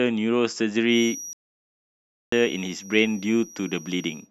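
Feedback whistle from 0.86 s to the end of this speech recording: a thin, steady tone at 5.8 kHz, roughly 20 dB below the speech and swelling and fading slowly in level, most likely from a loudspeaker-to-microphone loop held just at the edge of feedback. Playback stall from 1.33 s to 2.32 s: the speech cuts to silence for 0.99 s before resuming, pointing to a player that ran dry of data or had its audio thread blocked until it recovered.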